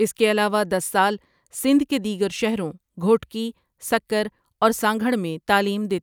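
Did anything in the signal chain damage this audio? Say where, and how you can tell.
No, nothing damaged it.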